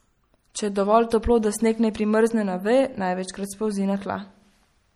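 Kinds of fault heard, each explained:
MP3 compression: an MP3 encoder short of bits, likely near 48 kbps, dropped weak detail, leaving the speech plainly swirly throughout.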